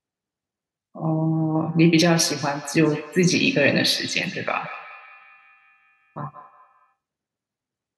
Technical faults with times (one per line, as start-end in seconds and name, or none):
1.33-6.96 feedback echo between two devices